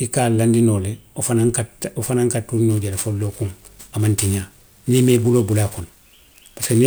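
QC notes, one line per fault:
2.70–6.87 s, sample clock jitter: from just after "ka wo fanaŋ ka" to the end, the converter clock wanders by roughly 10 µs, so samples land early or late and the error follows the waveform's slope. A hiss or grit sits about 20 dB below the speech, strongest on loud and sibilant parts and gone in pauses. On a spectrogram, broadband haze appears only under speech energy, densest at high frequencies.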